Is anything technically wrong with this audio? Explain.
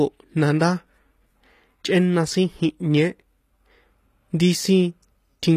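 Yes. HE-AAC compression, throughout the speech: the top end stops dead at 15 kHz, and the treble below that sounds synthetic rather than captured, likely from this codec at a bitrate that fits roughly 24 kbps. Only the lower spectrum is truly coded, and the upper bands are rebuilt by copying lower content upward under a coarse envelope. The damage is plainly audible: s sounds come out gritty and lispy, with a metallic sheen.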